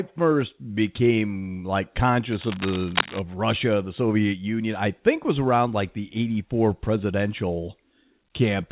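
Speech carried over a narrowband call path, with nothing above 4 kHz, which fits a telephone-grade codec. From 2.31 to 3.20 s a burst of cable scratch noise rustles over the speech at roughly the same loudness as the talker, most likely from a worn cable or connector being moved and its contact resistance fluctuating. On a waveform it shows as dense, ragged spikes; on a spectrogram, as irregular broadband speckle stopping at the 4 kHz ceiling.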